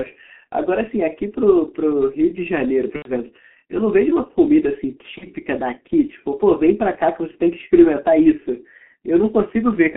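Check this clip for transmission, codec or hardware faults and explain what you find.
Two faults in this speech. The whole clip runs through a G.723.1 codec, heavily damaged: the band is limited to roughly 200 Hz to 3.4 kHz, and the coarse, slow-updating voice model, which fits a 6.3 kbit/s mode, leaves it muffled and hoarse with smeared consonants.

There's also VoIP packet loss concealed by the speech codec at 2.96 to 3.12 s and 5.18 to 5.27 s. The decoder stretches its last pitch and filter into a fading buzzy tone or coloured noise. The first gap sounds like three lost 30 ms frames and the second like one, and the voice stays weak or distorted for tens of milliseconds or more after each.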